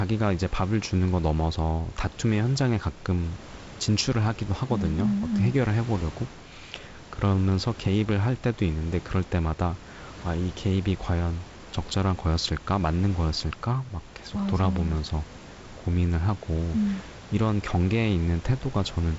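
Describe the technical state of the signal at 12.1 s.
At 12.1 s the audio is intact, with the room's background noise sitting about 19 dB below the speech and the G.722 wideband telephone coding leaving only a light hiss and nothing above about 7.7 kHz.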